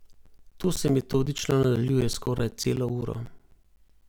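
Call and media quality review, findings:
Periodic USB or driver dropouts in speech, 0.13 to 4.02 s. Regular ticks every 0.125 s, around thirty in all, each about 10 ms of audio replaced by silence. Likely the capture USB bus or driver is blocked on a fixed schedule. Strict spacing separates this from random network packet loss.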